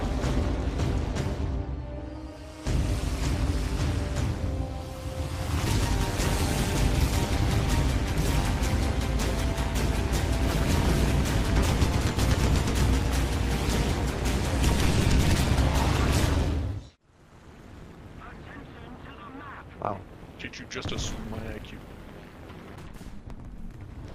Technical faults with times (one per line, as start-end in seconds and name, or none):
0.00-24.15 overlap-add ripple